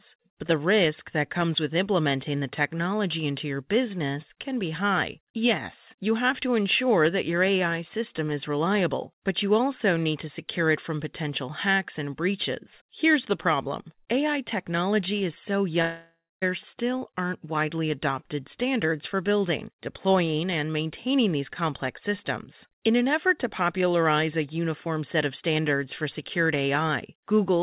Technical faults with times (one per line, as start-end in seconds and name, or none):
15.82-16.43 long network dropout